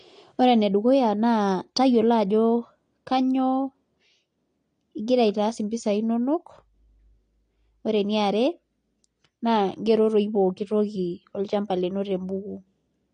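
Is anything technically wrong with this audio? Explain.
Yes. The speech carries AAC compression damage from start to finish. Nothing is present above about 9.7 kHz, so the top end sounds dull and closed in. Sibilants have a fizzy, smeared texture. Sustained sounds warble. The likely cause is lossy AAC-LC encoding at a low bitrate, consistent with roughly 32 kbps. At that rate the encoder cuts the upper band and quantises the remaining spectrum coarsely, leaving audible holes and artefacts.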